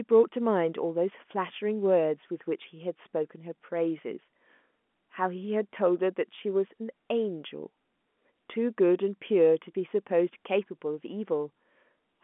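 The speech carries no technical faults, sitting within a telephone band of roughly 200 Hz to 3.4 kHz with nothing above about 3.7 kHz, as expected of G.711 telephone coding, which fits A-law at 64 kbps.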